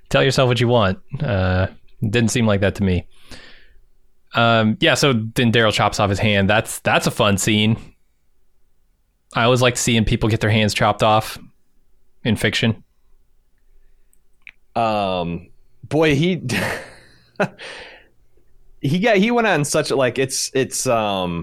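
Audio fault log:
No technical faults can be heard in this speech recording, and the signal holds steady with no breaks in level, timing or continuity.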